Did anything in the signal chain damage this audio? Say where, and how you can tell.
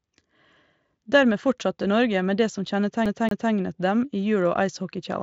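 Yes, a CD stuck on one turn at playback, 3.06 to 3.52 s: the same 0.23 s of speech repeats twice with muted jumps, longer than packet-loss repeats of a few tens of milliseconds.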